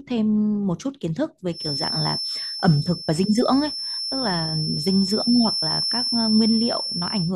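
Speech with a feedback whistle from 1.48 s to the end: a thin 5.3 kHz tone at one pitch, slowly swelling and fading, sitting just under the speech, likely from a speaker-to-microphone loop held at the edge of howling. Unlike full feedback, it never grows.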